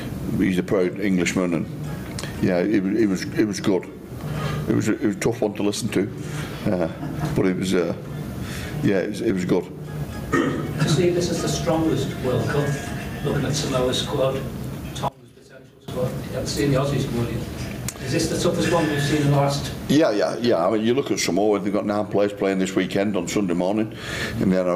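All the way through there's gain pumping: the level is pulled down on every loud sound, swinging something like 20 dB, so loud and soft parts sit closer together and the sound is squashed. Likely the input gain was set far too hot and a fast limiter keeps clamping it down.

From 15.08 to 15.88 s the sound suddenly drops by about 23 dB, with nearly everything gone and only a faint copy left. That's the signature of one channel inverted, likely a polarity flip cancelling the shared content when summed.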